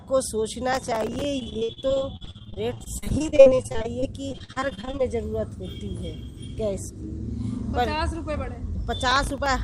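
A gritty burst of crackle tears across the sound from 0.73 to 1.25 s, and a shorter one returns from 9.11 to 9.46 s. This is processor overload crackle. The processor kept missing the deadline for its tiny buffers, each only a few milliseconds long. Every miss replayed a scrap of old audio with hard edges, dozens in a row in the first burst and a handful in the second.

From 1.39 to 5.01 s the sound turns choppy, with pieces audibly missing. This is repeated packet loss. Audio kept failing to arrive in time, and each hole was patched by stretching the last sound forward before the next hole came. Dozens of gaps, the longest about 59 ms, add up to roughly a third of that stretch being filled-in sound.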